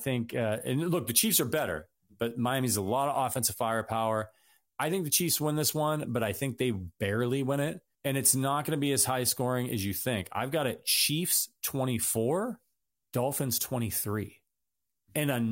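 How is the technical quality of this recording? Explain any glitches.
The recording has one persistent tonal fault. From 0.52 s to the end, pre-emphasis was left on: the treble boost, consistent with a 50 µs FM curve, was never de-emphasised. Highs sit about 11 dB hot at 10 kHz, so speech sounds thin, bright and sibilant, and a spectrogram shows unusually dense energy above 5 kHz.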